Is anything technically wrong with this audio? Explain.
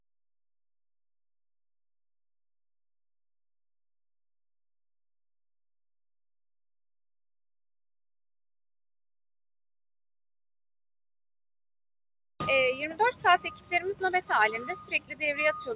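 Yes, there are two related problems, heard through a phone-band call path that tops out at 4 kHz, which fits G.711 A-law at 64 kbps.

A noise suppressor applied to music or sounds runs the whole way through. Built for speech, it treats steady, sustained material as noise, so levels pump by around 10 dB.

There is also sound cut by the noise suppressor at 12.74 to 13.0 s, 13.43 to 13.72 s and 14.93 to 15.22 s. Held sound sinks by about 12, 12 and 13 dB as the suppressor clamps down.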